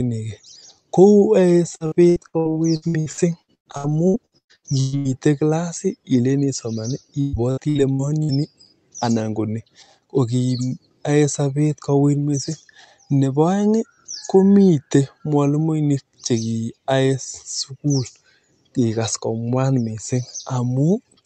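From 1.75 to 5.08 s there's repeated packet loss, giving that robotic sound. Chunks keep going missing, roughly twenty separate holes, the longest about 120 ms, and each one gets papered over by stretching the last bit of audio, so nearly 40% of that stretch is patched rather than real. It comes out choppy. The same thing recurs more briefly from 7.21 to 8.32 s, with a handful of holes, again up to about 120 ms, and about a third of it filled in. All of this sits on top of an Opus call path that cuts off around 8 kHz.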